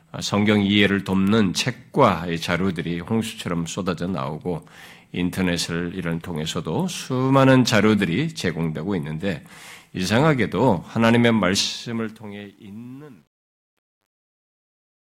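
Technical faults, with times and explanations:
11.6 to 15.1 s, truncation distortion on a fade: the speech fades out through a stage that keeps too few bits and adds no dither, which fits 10-bit resolution, so the quiet waveform breaks into coarse steps and turns gritty, worst from 12.46 s to the end.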